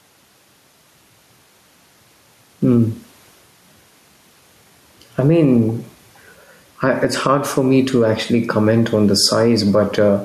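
Gain pumping runs through the whole clip. The room noise sits about 43 dB below the speech, and the gain swings by roughly 5 dB, pulled down under loud speech. This is likely from excessive input gain and a fast limiter.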